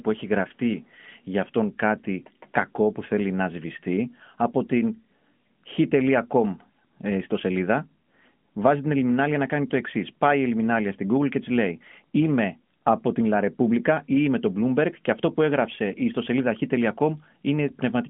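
No technical faults can be heard in this recording. The speech comes through a narrowband mobile link consistent with AMR-NB at its top 12.2 kbps mode, with nothing above about 3.5 kHz and only light coding colour.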